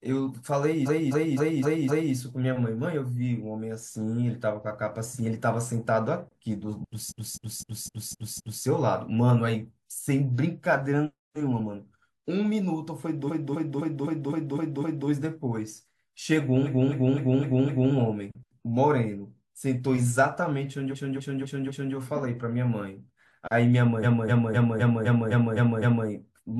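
Repeated frames occur six times: 0.85–2.13 s, 7.08–8.62 s, 13.27–15.06 s, 16.64–17.92 s, 20.91–21.93 s and 24.02–26.07 s. In each, the same 256 ms block of compressed audio was sent or written again, so the decoder replays that quarter-second of speech four to eight extra times. It sounds like a rhythmic stutter at about four repeats per second. Every event lengthens the speech by 1.0 to 2.0 s.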